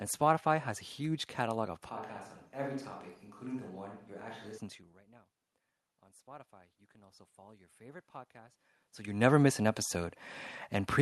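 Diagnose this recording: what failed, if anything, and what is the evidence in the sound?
At the capture stage, the close microphone's feed likely dropped out from 1.89 to 4.58 s, leaving a switch to a distant microphone. The speech turns abruptly roomy and hollow, thinner in the bass and about 10 dB quieter, with background noise more exposed, then snaps back.

In call processing, automatic gain rising: after the input fell by about 24 dB, the gain control raised its gain by about 7 dB between 6.0 and 10.22 s. Speech and background noise swell together gradually over those seconds, not in a single jump.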